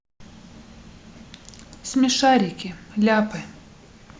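Speech recording with no audible technical faults.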